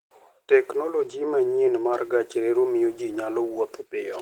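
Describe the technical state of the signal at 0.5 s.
Opus voice compression is present at 0.5 s and runs through the whole clip. A linear-prediction coder handles the lower band with a thin transform layer above 8 kHz, and the coarse coding, which fits roughly 16 kbps, leaves the speech plainly hoarse and slightly robotic.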